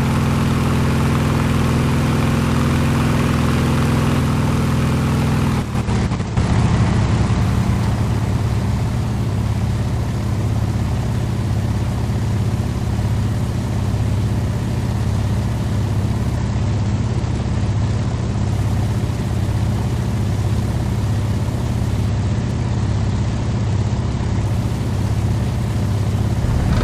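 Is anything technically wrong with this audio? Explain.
Yes. Bluetooth SBC bit pool drops occur at 5.84 to 7.41 s, 16.37 to 18.52 s and 22.09 to 24.45 s. The treble dulls and gritty noise rises, which points to the bit pool falling from 31 to 12, near 88 kbps, starving the upper sub-bands.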